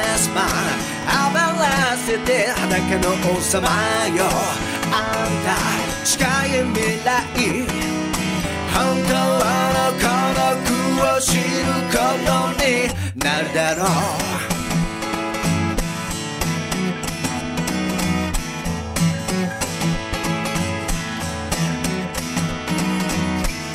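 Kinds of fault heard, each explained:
Word clock ticks: the receiving device runs on its own clock instead of locking to the sender's. The clocks drift apart by around 150 ppm, so each slip drops or repeats a single sample. This gives about 150 sharp ticks, roughly every 0.15 s, from 0.2 s to 23.7 s.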